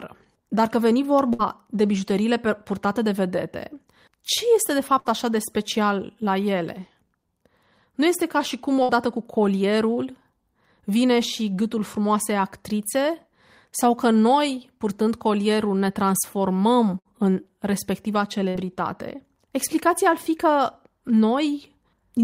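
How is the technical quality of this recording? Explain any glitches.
The speech is interrupted by five short glitches, all bursts of packet loss, at 1.33–1.42 s (after "că veni"), 4.99–5.08 s, 8.83–8.92 s (between "este ca și cum" and "cu colierul"), 16.99–17.08 s (before "în respectiva") and 18.49–18.57 s. Each one sounds like a brief held buzz or fading hiss lasting about 55 to 60 ms. After each gap the sound jumps ahead, with about 60 ms of speech missing. This happens because consecutive packets were lost or arrived too late. The receiver stretched and faded the last sound to cover the gap, then resumed playback further on.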